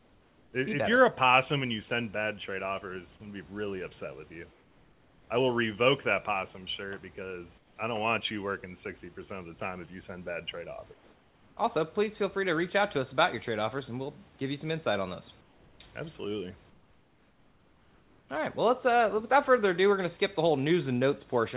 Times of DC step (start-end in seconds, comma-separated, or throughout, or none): none